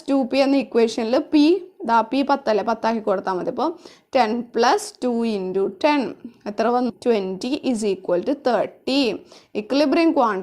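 At 6.89 to 6.93 s the sound jumps abruptly ahead with a brief blip, likely a stream segment skipped; the waveform shows a hard discontinuity and a thin vertical spectrogram line.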